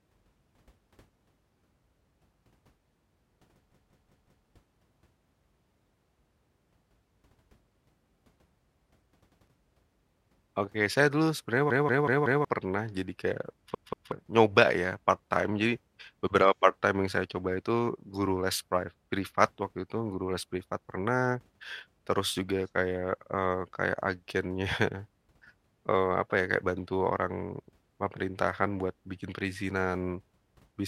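The speech stutters as one piece of about 186 ms replays with a hard join at each repeat: four extra times at 3.72–4.46 s, once at 9.29–9.47 s, four times at 11.70–12.45 s, and twice at 13.75–14.12 s. These are repeated buffers. New audio arrived late, so the player replayed its last buffer, which fits an 8192-sample buffer, and up to roughly 0.7 s of speech is lost each time.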